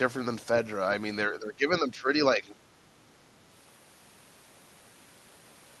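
The speech sinks from 1.29 to 2.09 s, again from 2.35 to 2.69 s, and briefly from 3.06 to 3.21 s, dipping by about 10 dB, then about 15 dB. This is speech suppressed in double talk, likely an echo canceller ducking the talker while the far side spoke.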